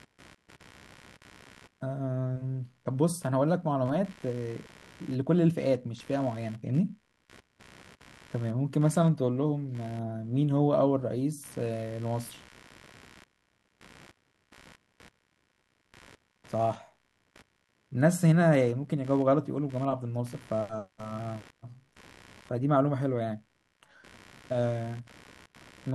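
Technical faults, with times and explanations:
Throughout, computer activity noise. A faint buzzing chirp sits well below the speech, pulsing about seventy times a second. It rises and falls with the computer's workload, not with the speech. Processor or graphics load shifts the shared ground, leaking into the audio circuit.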